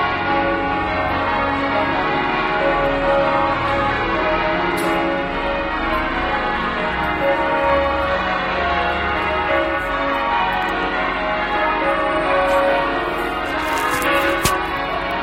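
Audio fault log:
0.12–15.19 s, clock slip clicks: a soft, steady rattle of faint ticks about every 0.07 s, roughly 200 in all, loudest on strong sustained sound. This fits single-sample slips from likely unsynchronised device clocks drifting apart by roughly 300 ppm.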